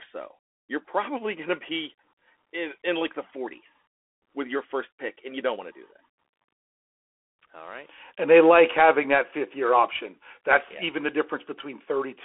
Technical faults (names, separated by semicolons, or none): Bluetooth CVSD headset codec